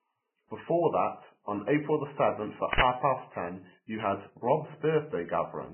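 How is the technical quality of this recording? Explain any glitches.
The technical quality is poor. The speech is heavily degraded from start to finish, and there is one short noise glitch near the middle.

Vorbis compression runs throughout the clip. Nothing is present above 3 kHz, and the treble that remains is grainy and hissy, with blurred consonant attacks. This likely comes from Vorbis coding at a very low bitrate, around 10 kbps. At that rate the codec quantises residue so coarsely that detail turns into noise.

An uninitialised buffer plays from 2.73 to 2.82 s. For about 85 ms the speech is replaced by a burst of digital noise. A playback block was sent out before audio was written to it, so leftover memory was heard as samples. The length fits a 4096-sample block.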